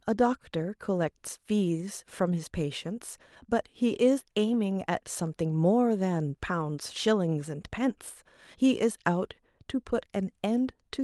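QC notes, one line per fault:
No faults found in the speech; the Opus call path at about 40 kbps is working as expected, with audio band-limited to around 12 kHz.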